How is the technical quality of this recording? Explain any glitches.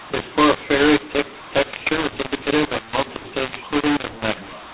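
Poor: the whole speech clip is harshly distorted by a mu-law and A-law mix-up on top of band-limited G.711 telephone coding, which cuts everything above 4 kHz. Throughout, samples written as mu-law are read as A-law, scrambling the logarithmic level mapping so the speech sounds gritty and the pauses fill with noise instead of silence.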